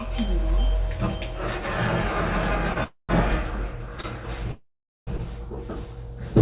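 Packets arriving late caused three short stalls from a late packet in this recording of everyday sound, at 2.73–2.78 s, 4.01–4.06 s and 5.17–5.21 s. Each time the jitter buffer briefly ran dry and the receiver stretched the last sound by about 32, 28 and 16 ms, giving a brief hold before the audio resumed with nothing lost. Longer holdups, likely packets held up in the network, produced two call audio freezes at 2.84–3.11 s and 4.52–5.09 s. In each, the held sound fades and then gives way to silence, for about 150 ms and about 430 ms respectively. The audio then continues from the same point, so roughly 0.25 s and 0.55 s of gap are inserted rather than anything being dropped. Throughout, the call path's band limit leaves nothing above 4 kHz, which fits G.711 coding.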